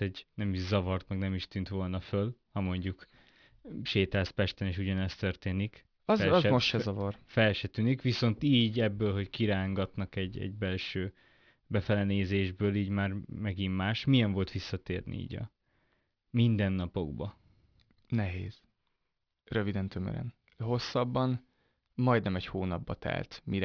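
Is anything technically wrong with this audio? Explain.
Yes. Aliasing runs through the whole speech clip. The audio was taken down to an 11 kHz sample rate without filtering first, so energy above the 5.5 kHz fold point mirrors back as false tones. Sibilants sound gritty and metallic. The folded energy sits roughly 25 dB below the signal.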